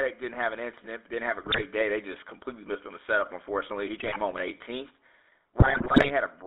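From start to finish the speech has a buzzy, gravelly roughness and a narrow telephone band, roughly 300 Hz to 3.6 kHz, with no air above. This is the GSM full-rate codec, which fits a 13 kbps stream built on a vocal-tract model and sparse pulse excitation.

From 1.42 to 1.63 s, 3.96 to 4.17 s and 5.6 to 6.11 s the speech breaks into squawks, pops and gargling. These are GSM bit errors: corrupted filter, pitch and gain values warp the spectrum and level frame by frame, and the last and longest burst is the worst.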